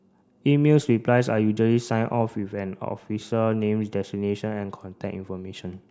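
No technical faults can be heard in this speech recording. Nothing in the audio points to a problem at any point along its path.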